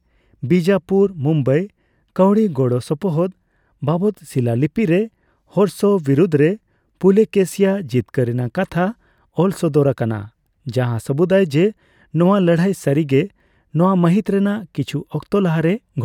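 No technical faults are audible.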